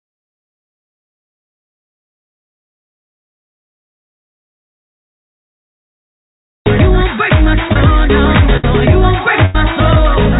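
Short concealed packet loss at 7.73 to 7.76 s: about 20 ms of audio arrived too late to decode, so the receiver extended the preceding sound to fill the hole and cross-faded back. It is heard as a brief smear or wobble in the band-limited audio. Nothing reaches above 4 kHz, which fits a G.711 mu-law call path.

Burst of packet loss at 8.57 to 8.64 s and again at 9.45 to 9.55 s: several consecutive packets were lost. The receiver continued the last sound for about 63 ms and 89 ms respectively, fading it, and playback resumed with roughly 70 ms and 80 ms of audio skipped.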